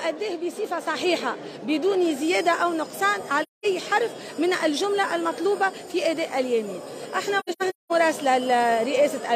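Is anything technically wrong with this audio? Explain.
Yes. AAC frame loss with muting occurs at 3.42 to 3.66 s and again at 7.39 to 7.92 s. The decoder had no data for these frames and set their spectrum to zero. The overlapping transform windows then fade the sound out and back in, leaving soft-edged gaps of silence. The first gap lasts about 213 ms, which fits roughly five frames. The second breaks up about 384 ms of sound in dropouts scattered over about half a second, the longest run near 200 ms.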